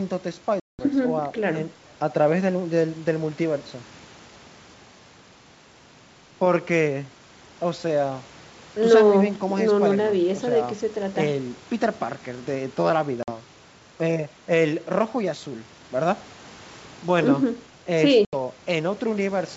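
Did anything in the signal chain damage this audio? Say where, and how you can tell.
Yes. The damage happened at the network stage: packet loss on an ADPCM call, carried over a G.722 link at 64 kbit/s. Speech drops to hard-edged silence at 0.60–0.80 s, 13.23–13.30 s and 18.25–18.34 s, with gaps of about 190, 50 and 80 ms. On a spectrogram each gap is a blank vertical column with sharp edges. The waveform flatlines, then resumes slightly distorted, sometimes with a click or at a jumped level. That happens because the decoder's predictor and step size lost track of the sender's and need tens of milliseconds to resynchronise.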